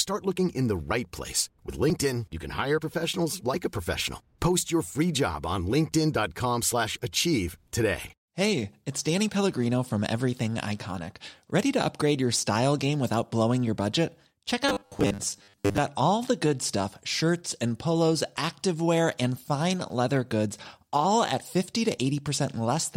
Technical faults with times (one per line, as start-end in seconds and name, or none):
14.69-15.79 robotic sound from repeated short buffers